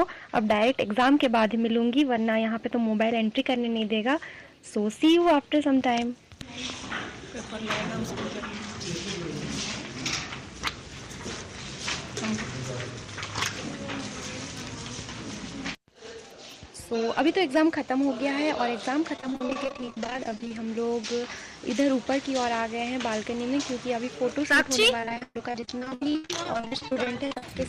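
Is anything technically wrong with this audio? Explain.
Yes, there are two problems. Hard clipping runs through the whole recording. The signal is driven about 12 dB past what the chain can pass, so roughly one percent of samples hit the ceiling and are cut flat. This produces crackly fuzz on peaks. The waveform shows squared-off tops, and the spectrogram shows broadband vertical smears reaching far upward.

Repeated packet loss (robotic sound) occurs from 19.16 to 20.51 s and again from 25.00 to 27.43 s. Dozens of short dropouts were each patched by extending the preceding sound, which makes the audio choppy. Concealment covers about a third of the first stretch and 40% of the second. The longest holes are 42 ms and 121 ms. On a spectrogram these stretches look like repeated, smeared blocks with abrupt seams.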